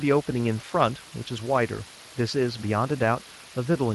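The whole speech clip has been reduced to about 6 bits, with dither added before rounding. The rounding error therefore becomes a steady, even white hiss, roughly 20 dB below the speech, with no grating distortion. It stays constant from start to finish, filling the pauses as well.

Throughout, the speech has also passed through the Speex codec. Its CELP coder has too few bits to rebuild the excitation faithfully, leaving plainly audible damage: a noisy, hoarse, grainy texture. The degree of damage fits a bitrate of around 22 kbps.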